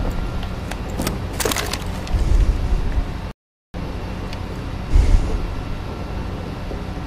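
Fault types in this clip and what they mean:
Rebuffering stall: at 3.31 s the audio drops to silence and stays silent until 3.74 s, then picks up exactly where it left off. The player used up all the audio it had downloaded and had to wait for more to arrive before it could continue. Nothing is skipped or repeated; the gap simply inserts about 0.43 s of dead air, so everything after 3.74 s plays that much later than it should.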